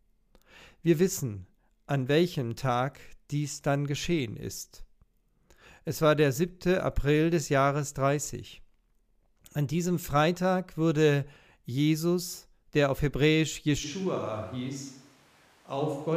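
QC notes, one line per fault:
13.86 s to end: switch to a distant microphone. The speech abruptly turns roomy and hollow, with thinner bass, and stays that way to the end. The likely cause is that the close microphone dropped out, leaving a farther pickup that hears more room. On the waveform the envelope steps down by about 5 dB with smeared decays. On the spectrogram the low end thins and a steady noise floor, roughly 30 dB below the speech, fills the gaps.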